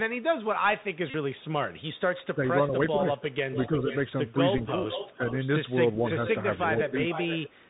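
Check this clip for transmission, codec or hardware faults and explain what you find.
The speech shows four kinds of fault: a narrowband headset codec throughout, three stretches of echo, two packet repeats, and two spans where the talker is ducked.

Bluetooth CVSD headset codec, whole clip: CVSD codes each sample as a single up-or-down bit whose step size adapts, which fits a 64 kbps link. Nothing above 4 kHz survives, so the sound is muffled. S sounds come out scratchy, and a grainy hiss sits underneath. Sudden loud high-frequency sounds outrun the step size and smear into distortion.

Echo leak, 0.81 to 2.26 s, 3.1 to 5.5 s and 6.03 to 7.69 s: a delayed copy of the far-end speech returns, most likely because the far end's echo canceller left some loudspeaker sound in its microphone feed. The first echo lags by 396 ms and is very faint. The later two lag by 471 ms and sit only around 10 dB below the speech.

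Bluetooth headset packet repeated, 1.10 to 1.14 s and 4.58 s: when radio packets are lost, the headset chip decodes the last good packet again. The first gap lasts 37.5 ms, which points to roughly ten lost packets, and the repeats form a short buzz near 267 Hz. The second gap, 11.2 ms, covers three lost packets and makes a very brief buzz.

Speech suppressed in double talk, 2.35 to 5.4 s and 6.83 to 6.93 s: both sides were talking at once, and the canceller, likely unable to separate the talker from the echo, turned everything down. In the first span, the level drops by about 5 dB in scattered pieces totalling under a second. At 6.83 s there is a single brief dip of around 10 dB.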